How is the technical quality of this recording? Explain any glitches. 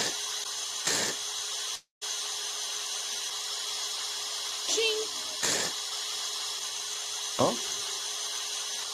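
One glitch stands out, a call audio freeze from 1.75 to 2.03 s. The last sound stretches into a fading buzz and then about 140 ms of silence, likely because delayed packets emptied the jitter buffer. Playback then resumes where it stopped, with nothing lost but running 261 ms late.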